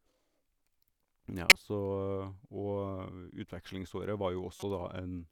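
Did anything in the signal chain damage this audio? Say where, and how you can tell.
Yes: a loud glitch at 1.49 to 1.56 s and a faint one at 4.56 to 4.63 s. These are corrupt frames decoded by the codec, with flipped bits putting energy at the wrong frequencies.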